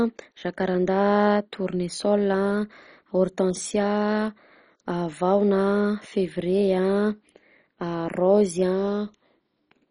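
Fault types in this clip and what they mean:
MP2 compression: The speech sounds dull, with nothing above 10.4 kHz, and carries a gurgling, granular roughness throughout, likely from MPEG Layer II coding at a rate near 32 kbps. Unlike a plain low-pass filter, upper sub-bands flicker unevenly and the remaining bands sound coarsely quantised.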